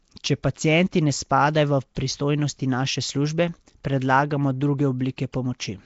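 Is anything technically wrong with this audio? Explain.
Yes, there are two problems. The whole clip has a rough, hissy halo around the speech and a smeared, underwater character. Nothing comes through above about 7.7 kHz. That combination points to Nellymoser compression, likely the old Flash microphone codec, and the damage is plainly audible. This codec spends a fixed two bits per sample on short blocks. Quieter bands get no bits and are filled in with noise, which gives the grainy fizz, and the overall sound fits roughly a 32 kbps stream.

There's also pre-echo in two spots, at 1.95 s, right before "pristojnosti naše službe predlagamo", and at 5.33 s. Each time a short hiss leads into a sharp onset by about 15 ms and about 13 ms respectively. The codec spreads its quantisation noise across the whole block, so when an attack lands late in a block, noise sized for the loud part leaks into the quiet moment just before it. 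The attack ends up sounding softened and smeared.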